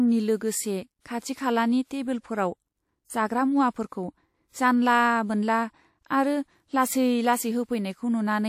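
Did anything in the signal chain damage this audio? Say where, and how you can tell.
Yes: brief hiss smears in ahead of attacks at 0.37, 1.00, 3.88 and 6.07 s, lasting 31 to 51 ms. This is codec pre-echo, with block quantisation noise spreading before each transient.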